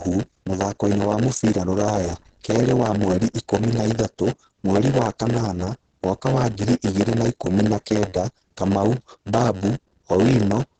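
From start to end the speech carries a block size mismatch (padded): each block arrives short and is topped up with zeros, leaving a brief gap every block. That produces a steady buzz at 91.9 Hz, and the speech runs at 0.919 of normal speed, slightly drawn out, with its timbre intact.

The whole clip is also muffled and hoarse, with heavy damage and nothing above 9 kHz. The cause is likely Opus compression in its speech (SILK) mode at wideband bandwidth, which fits a low bitrate of around 12 kbps, discarding high-frequency detail and roughening the voiced sound.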